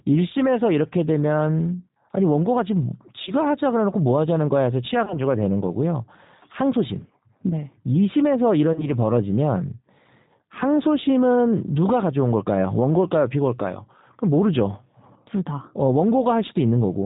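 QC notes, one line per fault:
Throughout, G.729 codec: speech is band-limited with nothing above 4 kHz and has a plainly rough, synthetic edge. The decoder rebuilds each 10 ms frame from a vocal tract filter, pitch predictor and a few pulses, which fits an 8 kbit/s stream.
3.23–3.32 s, 5.05–5.19 s and 8.73–8.91 s, VoIP packet loss concealed by the speech codec: the decoder stretched its last pitch and filter into a fading buzzy tone or coloured noise. About 40 ms went missing in the first gap and 20 ms in the others, and the sound stays weak or distorted for tens of milliseconds after packets return as later frames rebuild.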